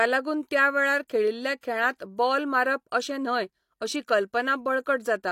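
Speech with pre-echo at 1.08 s, 1.61 to 1.63 s, 1.97 to 2.00 s, before "बॉल मारप अशें न्हय", and 4.07 s. Brief hiss precedes sharp onsets. Block-wide codec noise leaks ahead of each attack.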